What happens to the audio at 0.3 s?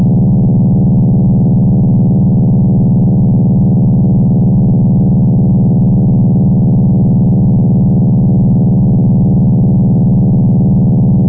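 Nothing goes wrong at 0.3 s; the sound there passes intact through the call path, with no dropout, glitch or distortion at that moment.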